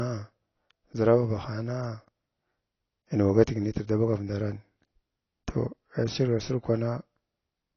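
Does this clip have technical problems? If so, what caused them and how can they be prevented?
Yes. Throughout the clip, nothing is audible above about 6.6 kHz. The speech sounds dull and smeared. Sibilants have a fizzy, warbling texture. This is likely AAC compression at a low bitrate. An AAC-LC encoder short of bits lowers its cut-off. It then quantises the remaining bands coarsely, leaving holes or noisy patches. The damage is plainly audible, which fits a bitrate of around 24 kbps. To prevent it, encode speech at 64 kbps or higher.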